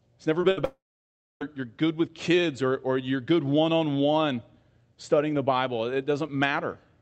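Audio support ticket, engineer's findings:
Short concealed packet loss, 0.41–0.45 s: brief smear or wobble in the speech, a short sound possibly swallowed. About 20 ms of packets arrived too late for the jitter buffer. The decoder continued the preceding sound for roughly 16 ms, then blended back into the real signal.

Burst of packet loss, 0.51–0.59 s: the sound stretches into a held buzz or hiss that fades, then speech resumes with content skipped. About 60 ms of consecutive audio was lost. Concealment extended the last frame and turned it down across the gap, and roughly 58 ms of filler was played in its place.

Long network dropout, 0.65–1.43 s: a fading continuation of the last sound, then about 0.6 s of silence before speech returns at "you're good with kids". Roughly 760 ms is gone. The likely cause is a network outage that outlasted concealment, so the filler decayed to nothing. 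Highs stop near 8 kHz, consistent with the Opus call path at about 32 kbps.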